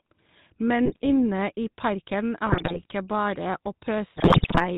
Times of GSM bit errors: 0.85-1.09, 2.46-2.94, 4.16-4.65

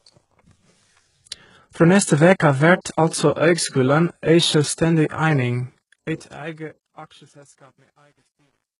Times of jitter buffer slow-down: none

